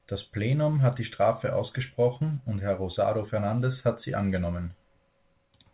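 Nothing stood out on listening to this speech recording.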